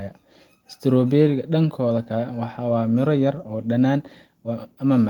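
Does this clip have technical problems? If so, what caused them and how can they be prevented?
No, no technical problems can be heard in this clip.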